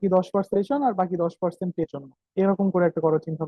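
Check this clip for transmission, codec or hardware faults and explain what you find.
Two faults of the same kind turn up in the speech, both compressed frames skipped. At about 0.53 to 0.56 s the audio jumps ahead by roughly 300 ms, and at about 1.83 to 1.86 s it jumps by roughly 200 ms. Whole blocks of coded audio never reach playback, either lost from the stream or rejected by the decoder as corrupt. The size of the jumps fits a 20 ms frame length. At each join the speech abruptly resumes further along. On a waveform the envelope changes suddenly at each point. On a spectrogram the harmonic pattern breaks off and restarts misaligned.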